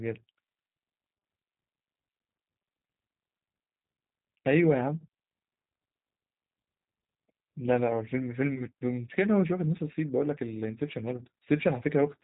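G.729 coding affects the speech throughout, and the damage is plainly audible. The sound points to a low-rate codec of about 8 kbit/s that models each 10 ms frame with a vocal tract filter, a pitch predictor and a handful of pulses rather than keeping the waveform. Nothing above 3.8 kHz survives, so sibilants sound dull and muffled, and the rebuilt voice has a rough, slightly synthetic buzz.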